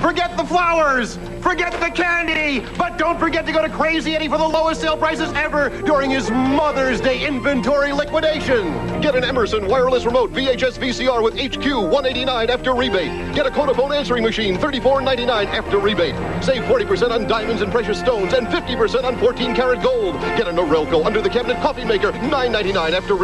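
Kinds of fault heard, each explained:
Chunks out of order: one 20 ms chunk plays three chunks late, between 2.28 and 2.36 s, so the sound briefly jumbles at three hard joins. Unlike a dropout nothing is missing, and unlike a repeat nothing plays twice.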